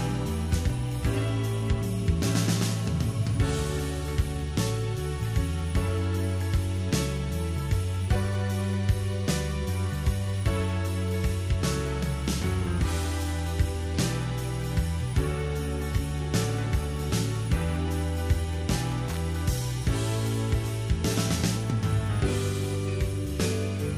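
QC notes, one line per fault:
19.08–19.17 s, loose connector crackle: a worn or dirty contact briefly makes and breaks, chopping the signal into an irregular, scratchy burst of about 90 ms.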